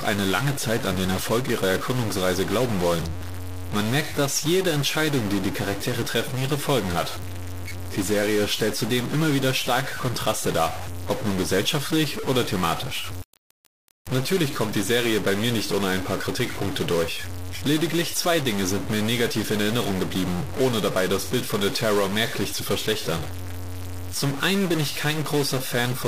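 From start to finish the speech carries a harsh, buzzy distortion, and the pauses between phrases are filled with a gritty noise floor rather than silence. The pattern points to a stuck bit, likely a single data line or converter bit held at a fixed value. About half the samples are shifted by that bit's weight, a step of about -25 dBFS, so the error follows the waveform and flips as quiet signals cross zero.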